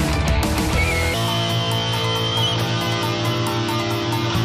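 From 1.14 s, a section at the wrong speed plays 1.37 times fast, likely a clock mismatch. Pitch rises about five semitones, and spectrogram harmonics jump upward.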